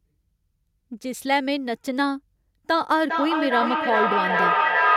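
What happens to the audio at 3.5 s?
At 3.5 s the speech returns in thin, ringing repeats about every 0.4 s, building to about 3 dB above the speech instead of dying away. This is feedback echo between two devices, running from 2.95 s to the end: one device's microphone picks up the other's playback, which neither echo canceller removes.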